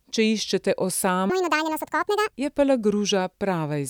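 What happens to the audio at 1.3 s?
Playback likely ran off a mismatched clock: a section at the wrong speed, 1.30 to 2.34 s, plays 1.74 times fast, hurried and about ten semitones higher.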